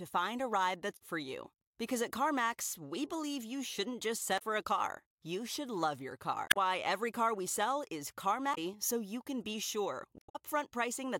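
Damaged data in the compressed stream breaks the speech five times: after "find a ride" (0.96–1.02 s), after "believe you shouldn't just" (4.35–4.42 s), 6.47–6.57 s, after "car we sell is" (8.51–8.58 s), and 10.18–10.36 s. Each time the decoder misreads corrupted frames and loses sync, producing a short glitch or hole. This shows as a brief broadband smear or gap in the spectrogram and an abrupt waveform discontinuity.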